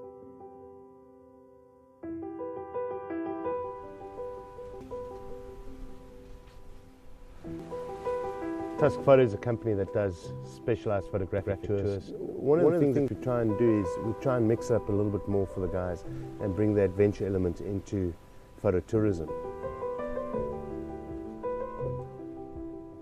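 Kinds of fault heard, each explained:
Compressed frames skipped: Whole compressed frames never reach the output. At 4.81 s the sound jumps ahead about 400 ms, fitting four frames of 92.9 ms. At 7.60 s it jumps about 100 ms, one frame.
Doubled audio track: From 11.38 to 13.08 s a second full-band copy of the sound plays about 150 ms behind, at roughly equal loudness. It has no decay or room colour and starts and stops abruptly. A slower second capture path is the likely cause.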